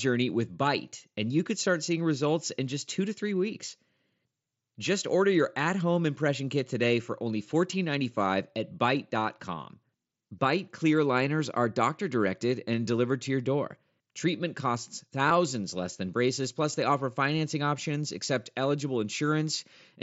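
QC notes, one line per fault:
15.29 s and 16.73 s, concealed Bluetooth headset packet loss: two brief gaps of about 15 ms and 7.5 ms on the headset link, the first consistent with two consecutive lost frames and the second with one. The receiver filled each gap by repeating the best-matching stretch of the last 20 ms or so of the waveform, so both are short patches within the mSBC wideband speech.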